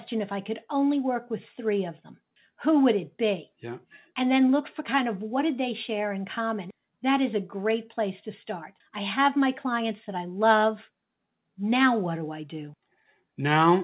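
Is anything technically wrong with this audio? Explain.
No, nothing stood out on listening to this speech clip, which carries the narrow, telephone-like sound of a G.711 mu-law call path with nothing above about 4 kHz.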